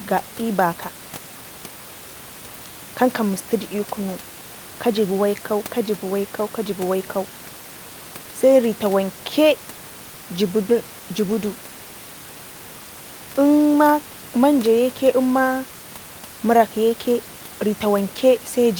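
No technical faults can be heard in this speech recording. A low level of room noise sits about 23 dB below the voice, which is part of the recording itself rather than a fault.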